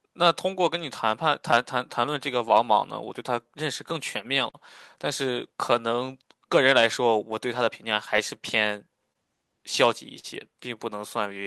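Speech, roughly 11 seconds long, affected throughout by clock drift between the sender and the receiver: the sender's clock runs slow by roughly 3 percent, so the receiver's buffer keeps draining rather than overflowing. Unlike a one-off network delay, this is a steady mismatch in rate, and its signs are spread across the whole recording instead of clustering around one moment. What gives it away is that every correction leans the same way, stretching time, never compressing it.

The audible result is a run of repeated timing corrections from 0.08 s to 8.97 s, where the receiver repeatedly inserts tiny repeated slices to keep pace. The effective speed is 98 percent, and in total about a fifth of a second is added. Each insertion is too small to stand out, so it comes across as a slightly dragging, uneven tempo with faint hiccups at irregular spacing. This differs from packet-loss concealment because nothing is being patched over; the material is simply spread out.

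At 4.50 s to 4.56 s there is a short stall from a late packet. The buffer ran dry, and the receiver held the last sound for 40 ms until the data arrived, then resumed exactly where it left off with nothing lost. It is heard as a single sustained smear or slight buzzy dip. Unlike the drift corrections, it is one isolated event tied to a 40 ms jump in delay.

From 8.17 s to 10.26 s come scattered short gaps, about three of them. Each is filled by extending the preceding sound, roughly 70 ms of fill in all and none much longer than 40 ms, covering about 4 percent of that span. They come across as brief ticks or smears. They differ from the stall because they are several separate small holes spread over two seconds rather than one held moment.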